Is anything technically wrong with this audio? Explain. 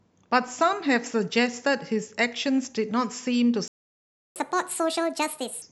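Yes, the speech breaks off and then rushes.

Playback stall: at 3.68 s the speech cuts to silence for about 0.68 s, resuming at 4.36 s. This is likely the player running out of buffered data, or its playback thread being blocked, so nothing reached the output until it recovered.

Catch-up at higher speed: from 4.36 to 5.62 s the speech runs 1.5 times fast and sounds chipmunk-like, about seven semitones high. The player is resampling its backlog to recover the time lost in the stall, then drops back to normal speed.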